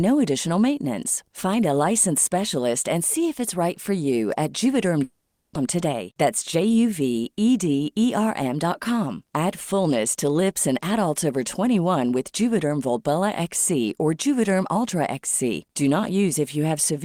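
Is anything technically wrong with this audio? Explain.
Yes, two related problems show up early in this speech clip.

Right after "right for you at", from about 5.03 to 5.57 s, there's a long network dropout. What you hear is the last bit of sound stretched into a fading buzz for roughly 520 ms, with no dead silence, and then the speech picks up again with about 400 ms simply gone. That pattern is most likely a stall in packet delivery that the receiver papered over with concealment.

Straight after, from 5.65 to 6.93 s, there's a jitter buffer speed-up. The late audio piled up in the buffer once delivery resumed, so the receiver trimmed out tiny pitch-period slices over and over to drain the excess, around a tenth of a second in total. The speech runs about 8% fast at unchanged pitch, so that stretch sounds a little rushed.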